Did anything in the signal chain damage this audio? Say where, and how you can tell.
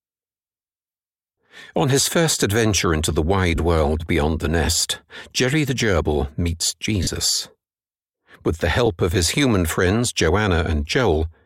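Yes, at the Bluetooth LE Audio link: lost LE Audio frames at 3.56–3.58 s, 7.03–7.07 s and 8.86 s. Each 20, 40 or 10 ms gap, consistent with 10 ms LC3 frames, becomes a brief noisy smear as the decoder replays the last spectrum with random signs.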